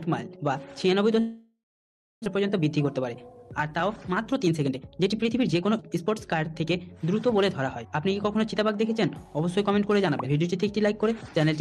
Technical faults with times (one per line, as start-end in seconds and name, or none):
1.19-2.28 long network dropout
2.35-6.64 jitter buffer speed-up